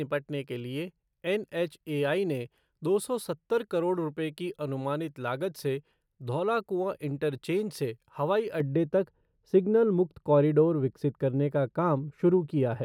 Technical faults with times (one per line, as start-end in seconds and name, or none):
8.60-12.84 de-emphasis applied wrongly